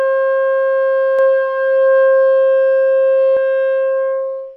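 A second capture path, likely a slower one, mixes the sound in twice from 1.19 to 3.37 s, leaving a dry copy roughly 0.7 s behind and about 5 dB quieter that starts and stops abruptly: a doubled audio track.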